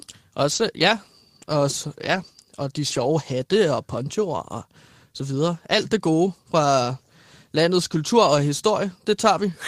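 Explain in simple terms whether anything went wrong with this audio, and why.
Three short stretches sound rough and grainy: 0.51 to 0.61 s, 2.11 to 2.29 s, and 2.91 to 3.05 s. This is a lost packet rebuilt from error correction. Bits of speech went missing. Backup copies filled them in, so nothing drops out, but those parts sound cruder.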